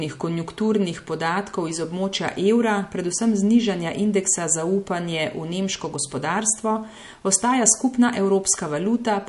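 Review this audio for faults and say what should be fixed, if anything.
Heavy MP3 compression, likely at a low bitrate around 48 kbps, runs throughout the speech. Starved of bits, the encoder removes everything above about 11.3 kHz and drops weak spectral lines frame by frame, giving a dull, watery, swirling quality with chirpy, metallic s sounds. Encode at a higher bitrate or keep a lossless copy for processing.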